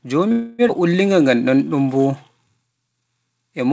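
A short speech recording carries three call-transmission faults, heard over the G.722 call path's band limit with nothing above 8 kHz. From 0.32 to 0.62 s the sound stalls into a fading buzz or hiss for roughly 0.27 s and then resumes with nothing lost, a call audio freeze, likely from delayed packets draining the jitter buffer. Between 0.68 and 0.72 s playback lurches forward as about a fifth of a second of speech vanishes, a skip ahead where a stretch of audio was dropped and the edges butted together. From 0.79 to 2.52 s the speech drags at about 89% speed with unchanged pitch and stretched sounds, a jitter buffer slow-down adding roughly 0.2 s by repeating pitch periods to rebuild its reserve.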